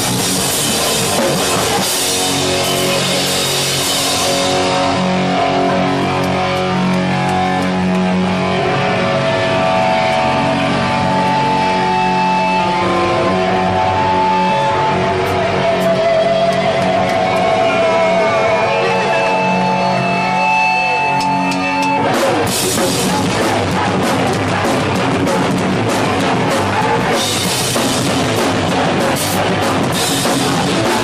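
No audible fault turns up anywhere in the recording; level, continuity and timing all hold steady throughout.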